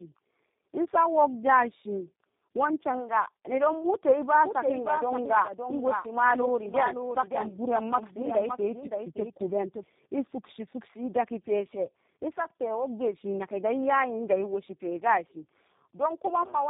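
Throughout, tandem speech coding: the speech passed through G.726 at 24 kbit/s and then G.729A twice, with G.711 mu-law links between, so each coder re-encoded the previous one's damage. The result sounds rough, muffled and warbly, with nothing above 3.7 kHz.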